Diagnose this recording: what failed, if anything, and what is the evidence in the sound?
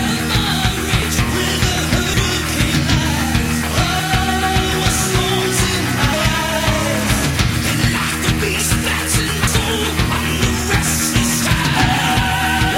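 Driver or buffer stage: forward jumps at 1.02, 2.14, 3.99, 6.13, 9.47, 11.42 and 12.17 s, each skipping about a tenth to a fifth of a second without any silence, likely a dropped buffer (overrun) where unread samples were overwritten.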